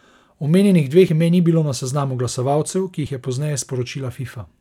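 Audio missing between chunks occurs at 1.09 s and again at 3.07 s, two abrupt skips in the speech spaced almost exactly 2 s apart. At each point a sliver of about 20 ms vanishes and the sound on either side is butted together with no gap, so the flow jumps slightly forward. The regular spacing points to a likely cause in processing that handles the audio in 2 s chunks and drops a short piece at each handover.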